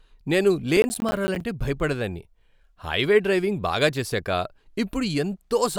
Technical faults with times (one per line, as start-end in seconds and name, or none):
0.77-1.41 processor overload crackle